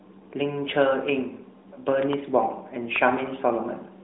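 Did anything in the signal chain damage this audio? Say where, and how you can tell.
Yes. A single loud pop sits from 2.96 to 2.98 s in this speech clip. It is a sharp, brief click that peaks roughly 10 dB above the surrounding speech. The speech carries on underneath without a break. The likely cause is a voltage step in the analogue wiring, such as a plug, switch or static discharge. The circuits after it shaped that step into a short pulse. The narrowband band limit of the AMR-NB mobile link is audible too.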